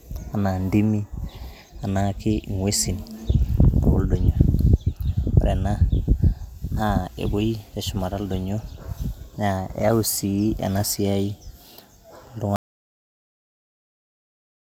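Speech recording with an audio dropout to silence from 12.56 s to the end. The sound stops abruptly into silence with no room tone, unlike a gate's gradual decay, likely from a lost input.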